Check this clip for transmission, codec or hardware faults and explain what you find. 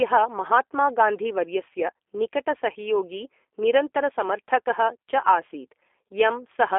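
There's one fault, and it runs the whole way through: the speech has gone through a G.729 codec, most likely the G.729A variant. It's a low-rate voice coder that rebuilds speech from a vocal tract filter, a pitch predictor and a sparse set of pulses per frame, which fits an 8 kbit/s link. It sits on a telephone line band of about 300 Hz to 3.5 kHz, with nothing above 3.6 kHz. So the speech sounds muffled and boxy, with a plainly audible rough, synthetic edge.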